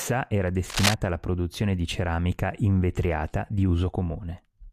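A worn cable or connector being moved, with its contact resistance jumping about, is the likely cause of the cable scratch noise from 0.70 to 0.94 s, just before "alla produzione di ceramica". The unstable contact injects dense, irregular bursts of noise into the signal, roughly as loud as the speech itself, so for about a quarter of a second a harsh scratching, rustling texture sits on top of the voice.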